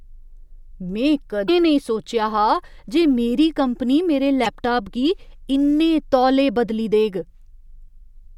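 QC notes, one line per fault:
1.45–1.49 s, 4.43–4.47 s and 7.84–7.88 s: damaged data in a compressed stream. Each is a brief glitch where the decoder loses frame sync and resyncs.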